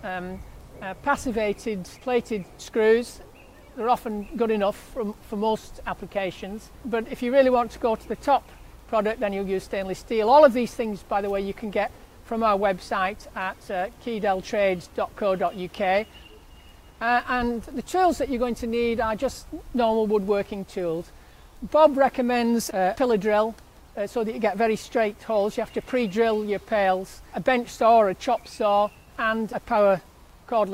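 No faults can be heard anywhere in the recording.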